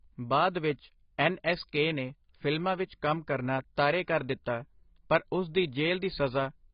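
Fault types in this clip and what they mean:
AAC compression: speech loses everything above 5.1 kHz and sounds heavily smeared, with a warbly or fizzy texture, unlike a clean low-pass filter, likely from a very low bitrate around 16 kbps.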